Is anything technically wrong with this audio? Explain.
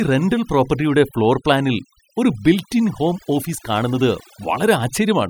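Yes. Throughout the speech, noise reduction has been applied far too aggressively, a case of overdone noise removal. The processor pushes individual frequency bands down to almost nothing whenever their level sits close to its noise estimate, and the softer parts of the voice fall below that line along with the noise. The background collapses into near silence dotted with twinkling specks.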